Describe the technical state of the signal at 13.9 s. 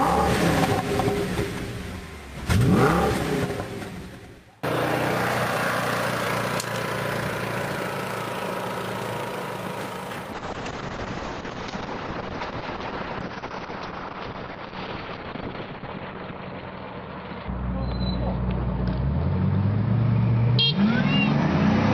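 At 13.9 s the signal is inside a call bitrate drop that starts at 10.35 s and lasts to the end at 21.94 s. The encoder's budget fell from 64 to 7 kbps, holding its lowest rate for about 5.35 s, so it codes coarsely and caps the bandwidth at 6 kHz instead of 20 kHz. The sound is muffled and rough, with a watery texture. A spectrogram shows a hard ceiling at 6 kHz with blotchy, smeared energy below it.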